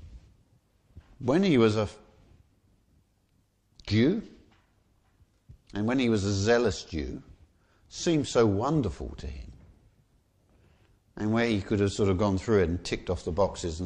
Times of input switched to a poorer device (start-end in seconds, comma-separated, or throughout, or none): none